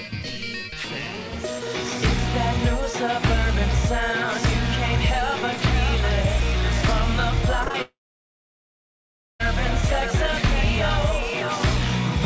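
Between 7.64 and 7.76 s, three back-to-back bursts of short concealed packet loss, each about 20 ms, leave a quick smear where extrapolated sound briefly replaces the real signal before it resumes. From 7.82 to 9.42 s a long network dropout is the likely cause of the gap. A continuation of the last sound fades out and leaves about 1.4 s of near silence, far longer than those smears, and the sound then returns with that stretch missing. Throughout, the G.722 call path passes nothing above 8 kHz.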